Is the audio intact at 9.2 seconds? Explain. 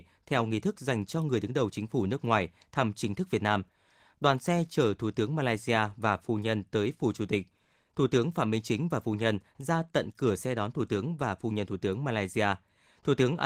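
Yes, the audio is intact at 9.2 seconds, with the speech continuing cleanly through the Opus voice compression and no dropout, glitch or other fault at that moment.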